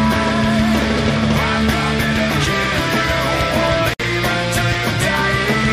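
At 3.94 s, a 59 ms gap at a join of encoded pieces: untrimmed encoder padding silences the sound, shown as flat waveform and a blank, softly edged spectrogram band.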